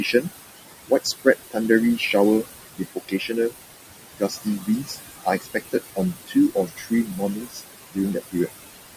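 Noise suppressor artifacts run through the whole recording. The room noise, about 10 dB below the speech, is pulled down by about 19 dB between phrases and rises under them. Speech cut by the noise suppressor occurs from 0.88 to 1.57 s, 2.76 to 3.54 s, and 4.13 to 8.48 s. Quiet speech is misread as noise and dropped by about 19, 21 and 20 dB, swallowing roughly 0.15 s, 0.3 s and 1.5 s of sound respectively.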